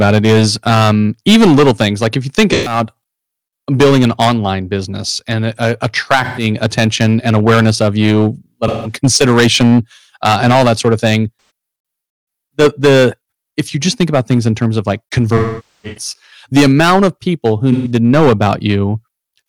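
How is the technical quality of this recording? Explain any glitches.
The recording has two technical faults: constant overload distortion and repeated dropouts in the decoded stream.

Hard clipping: the speech was driven about 11 dB beyond what a stage in the chain could pass, so a few percent of samples have their peaks sliced flat. The flattened tops add high harmonics, giving a harsh fuzz on every loud syllable throughout.

AAC frame loss with concealment: the decoder lost short runs of frames at 2.53 to 2.79 s, 6.24 to 6.44 s, 8.67 to 8.97 s, 11.37 to 11.50 s, 15.37 to 16.13 s and 17.72 to 17.91 s, and filled the gaps by reusing the previous spectrum. Most gaps, around 130 to 170 ms, sound like smeared, phasey blurs. At 15.37 to 16.13 s, a run of about half a second decays toward silence and fades back in.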